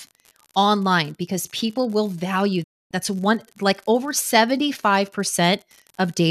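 A steady, even crackle or fizz runs under this speech recording from start to finish, continuing through the pauses; that is an unreliable data bit, where one marginal data line flips its bit in a random share of samples, producing identical-sized spikes. From 2.63 to 2.91 s the audio fades out within about 8 ms and goes silent before returning, a digital broadcast dropout: the receiver lost good frames, muted until valid ones arrived, and the material in that gap, consistent with roughly eleven lost frames, is gone.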